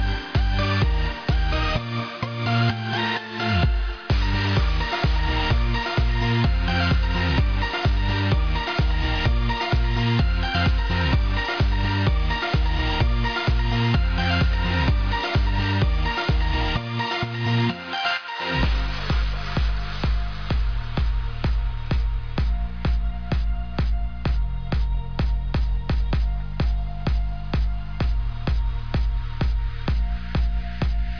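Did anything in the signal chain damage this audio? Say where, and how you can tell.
No damage from the chain.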